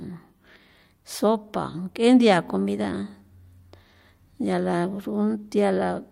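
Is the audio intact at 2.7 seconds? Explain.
Yes, the speech at 2.7 seconds is intact, with no dropout, click, distortion or other fault at that moment.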